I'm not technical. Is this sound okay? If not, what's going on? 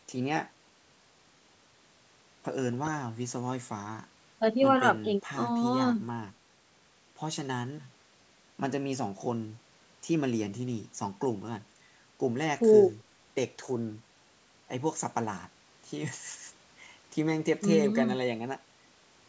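Yes, nothing here sounds wrong; it's ordinary call audio.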